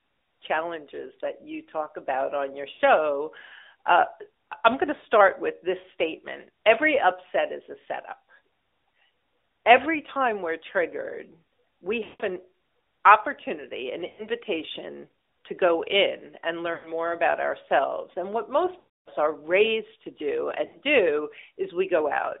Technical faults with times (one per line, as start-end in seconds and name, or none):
0.00-22.40 AMR narrowband mobile codec
2.72-2.82 lost AMR speech frames
4.48-4.54 lost AMR speech frames
12.04-12.22 lost AMR speech frames
14.08-14.27 lost AMR speech frames
16.74-16.90 lost AMR speech frames
18.78-19.11 lost AMR speech frames
20.66-20.80 lost AMR speech frames